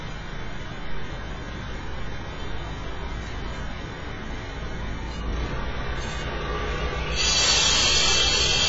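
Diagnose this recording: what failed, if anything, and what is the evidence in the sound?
The whole clip sounds dull and smeared, with a fizzy, warbling texture and nothing above 7.6 kHz. That's likely heavy AAC compression at the codec stage, consistent with a very low bitrate around 16 kbps.

From 7.23 s to the end, loud peaks turn into violent cracks, sharper than clipping. That's integer overflow in sample-format conversion: peaks about 4 dB over full scale wrap to the opposite sign.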